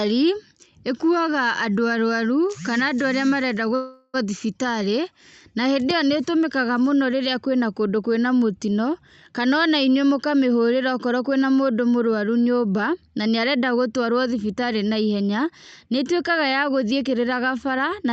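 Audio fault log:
3.75–4.16 s long network dropout: the sound smears into a fading buzz for 0.4 s, then resumes with that part lost. Likely a network outage.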